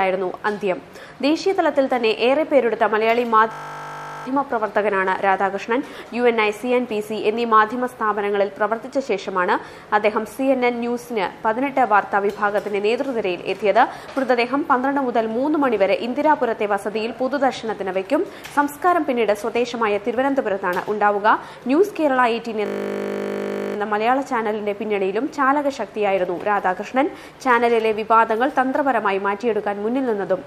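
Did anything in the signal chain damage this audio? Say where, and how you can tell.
Yes. A system hang loop at the driver or buffer stage, 3.52–4.26 s and 22.66–23.76 s: the same 20 ms piece repeats dozens of times, giving a steady 50 Hz buzz. This fits a 20 ms ring buffer cycling while the host froze. Essentially no audio is skipped.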